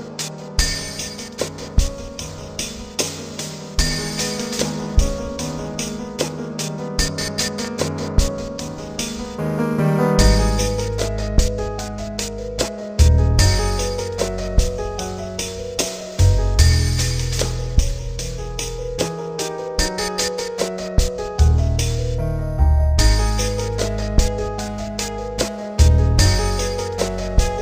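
A loud pop arrives at 7.65 s and lasts until about 7.67 s: a single sharp crack that rises a few decibels above the surrounding sound, while the audio continues unbroken beneath it. A brief voltage spike has been added to the signal, likely from a plug, switch, static discharge or driver glitch. The downstream circuitry shapes that spike into a short click rather than a clean step, and it registers as one distinct pop.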